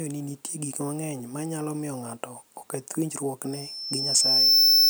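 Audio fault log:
3.52–4.90 s, loudspeaker feedback squeal: the microphone is picking up the loudspeaker it feeds, and around 5.3 kHz the gain around that loop rises above one, so that frequency keeps re-amplifying itself. A thin, piercing tone appears, swells over roughly a second, and settles at something like 15 dB above the speech. Nothing breaks the loop, so the squeal is still sounding when the clip ends.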